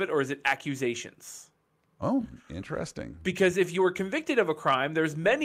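At 0.46 to 0.53 s, right after "it or is it", the speech drove a gain stage about 5 dB past the level it could pass, so the waveform peaks were sheared flat. This hard clipping sprays harmonics high into the spectrum, heard as a brief harsh crackle. It returns from 4.39 to 4.74 s, after "if you were convicted", with a smaller overload of about 2 dB, giving a longer but milder roughness on the peaks.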